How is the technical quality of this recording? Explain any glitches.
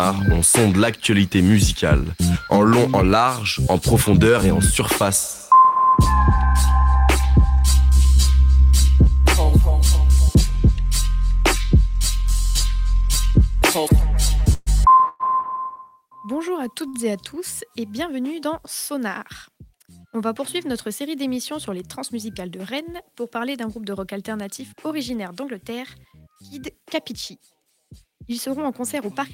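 The recording has four network-related glitches: two call audio freezes, one short stall and one burst of jitter buffer speed-up.

From 14.53 to 14.68 s and again from 15.08 to 15.22 s, the sound locks onto a fading buzz for about 131 ms and 112 ms, with a brief near-silence in the first. Each is a call audio freeze, likely caused by delayed packets emptying the jitter buffer. The receiver extended the last sound, then resumed without loss.

At 16.88 s a sound hangs on for about 53 ms with a slight buzzy dip before carrying on. This is a short stall from a late packet: the receiver stretched the previous sound until the missing packet arrived.

From 25.30 to 27.59 s the audio runs about 5% fast at unchanged pitch and feels slightly hurried. This is jitter buffer speed-up: with surplus audio queued, the receiver repeatedly clipped out pitch-period slices, removing roughly 150 ms in total.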